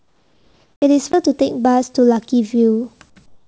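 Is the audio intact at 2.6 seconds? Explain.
Yes, the speech at 2.6 seconds is intact, with nothing there beyond the ordinary band limit of the G.722 call path, which leaves no content above 8 kHz.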